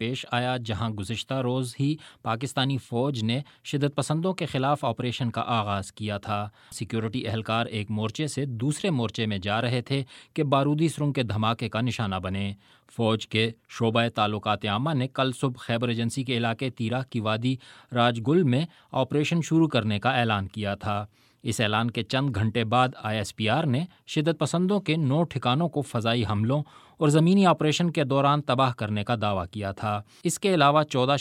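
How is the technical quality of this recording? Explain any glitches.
No glitches are audible anywhere in the recording, and its technical quality holds steady throughout without any dropouts, distortion, or other disruptions to the signal.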